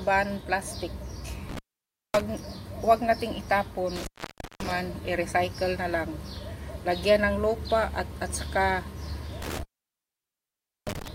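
At 1.49 to 2.22 s, 3.96 to 4.71 s and 9.42 to 11.08 s, an intermittent contact breaks the signal path, as a loose plug or cable briefly loses connection. The sound drops out for about 0.56 s, 0.54 s and 1.24 s, with crackle at each break and reconnection and faint hiss in between. On a waveform these show as near-flat gaps edged by sharp spikes; a spectrogram shows vertical broadband streaks at the edges around empty stretches.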